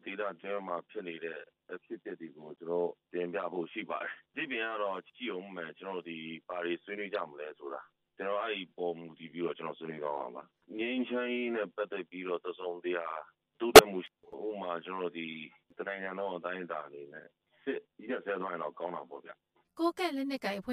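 One channel lags by around 10 ms before the mono sum. This channel delay comb filtering notches the spectrum from about 40 Hz up, so the sound is hollow throughout. Corrupt frames were decoded at 2.57 s, at 7.15 s and from 13.76 to 13.81 s, a couple of frames each time, putting energy at wrong frequencies: first faint, then clearer, then loud.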